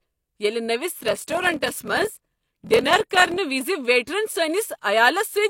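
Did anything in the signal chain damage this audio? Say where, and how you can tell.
Yes. Block size mismatch (padded) at the buffer stage, 0.92 to 3.37 s: a 41.7 Hz buzz and speech slowed to 0.889x, which fits 1024-sample blocks zero-padded into larger reads.

Pre-echo in the codec at 4.06 s: a short hiss spreads about 13 ms ahead of a sharp attack, from quantisation noise smeared across the transform block.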